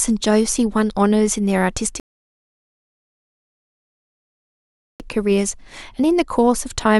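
Speech clip in which the streaming player ran out of downloaded audio at 2.00 s and halted until more data arrived, a rebuffering stall. The result is a gap of silence lasting 3 seconds, to 5.00 s, after which the speech resumes exactly where it stopped, with nothing skipped.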